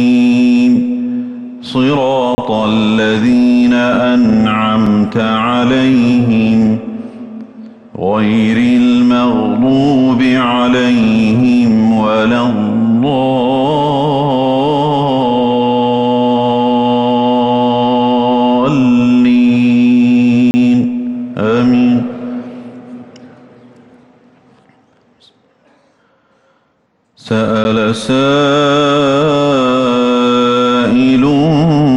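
At 2.35 to 2.38 s and 20.51 to 20.54 s there's a 30 ms block of digital silence, and at 27.64 s a 10 ms one. The output likely wasn't filled in time, so the audio drops hard to silence, heard as short holes and a tick.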